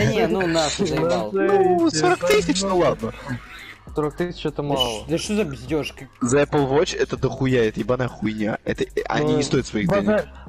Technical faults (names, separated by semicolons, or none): overlapping chunks